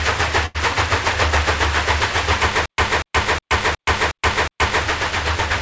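At 0.46 to 0.56 s the last sound is held and fades for about 85 ms, then resumes with about 80 ms skipped: a burst of packet loss, concealed by the receiver. From 2.66 to 4.84 s a 240 ms fragment repeats six times, every 364 ms, separated by 124 ms of dead silence, a stutter with silent gaps likely caused by a stalled stream replaying its last buffer. Throughout, nothing is heard above 8 kHz, which fits a wideband call codec such as G.722.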